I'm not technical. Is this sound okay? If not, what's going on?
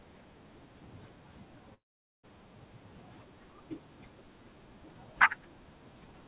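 No. At about 1.74 s the speech cuts out until about 2.25 s, and that half second of speech is simply gone. This is a long network dropout, likely from the connection briefly losing audio on its way to you. Rather than a clean gap, you hear a brief fading buzz or hiss continuing the last sound, then near silence. Unlike a quick click or stutter, this lasts long enough that the speech jumps ahead when it returns. The muffled, phone-like tone, with nothing above 4 kHz, comes from the call line itself, not from the dropout.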